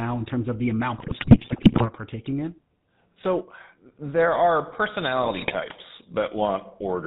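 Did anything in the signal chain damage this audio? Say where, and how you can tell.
Yes. The codec stage damaged the speech for the whole clip. It was carried through the GSM full-rate codec, and the plainly audible coding damage fits that 13 kbps coder. The codec rebuilds the voice from a vocal-tract filter driven by a sparse, regularly spaced pulse excitation, so the voice comes out buzzy and gravelly rather than smooth. Nothing survives above 4 kHz, which leaves the sound band-limited and dull.

The network link also introduced GSM bit errors, in two bursts. The first, from 0.98 to 1.88 s, is the heavier one and fits a high error rate across many consecutive frames. The second, from 5.22 to 5.55 s, is lighter and shorter. Corrupted filter, pitch and gain parameters reached the decoder, which then reshaped the spectrum wrongly and misjudged the level frame by frame. The voice breaks into squawks, pops and gargling there.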